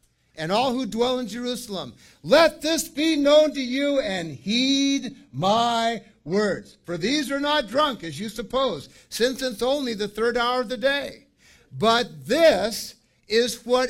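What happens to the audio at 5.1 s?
At 5.1 s the audio is inside a stretch of adaptive stream playback at a lower bitrate, from 2.88 to 8.88 s. The player switches abruptly, without a gap, to a leaner encoding, consistent with roughly 16 kbit/s HE-AAC. Nothing is heard above 12.3 kHz, the treble is cut back, and artefacts thicken.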